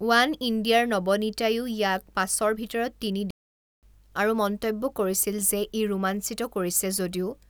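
The player likely ran out of data, causing a playback stall from 3.31 to 3.83 s that cuts the speech to silence mid-flow for 0.52 s.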